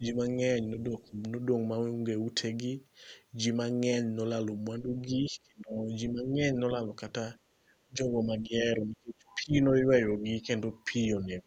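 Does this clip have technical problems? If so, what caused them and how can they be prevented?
Yes. The speech dips a few decibels at 0.0–0.39 s and 0.77–1.17 s, then drops out heavily in pieces during 4.82–6.79 s, 7.53–10.48 s and from 11.14 s on. This is likely speech suppressed in double talk, with the echo canceller treating overlapping talk as loudspeaker echo. Headphones or echo cancellation with better double-talk detection prevent it.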